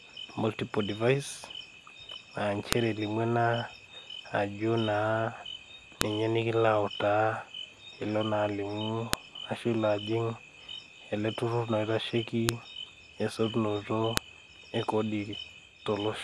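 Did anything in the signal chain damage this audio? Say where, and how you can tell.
Yes. The damage is at the storage stage, where speech pieces were joined with their WAV headers intact. Sharp snaps occur at 2.73, 6.01, 9.13, 12.49 and 14.17 s, the second just before "ninye nikilo autaa", the third before "ashu ilo ajing". This is a file header played as audio.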